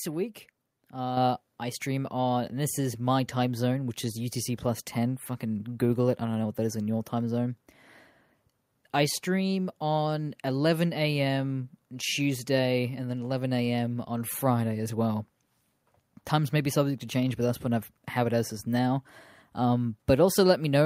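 At 1.17 s the microphone volume stepped up by about 6 dB in one jump, so voice and background noise both get louder together.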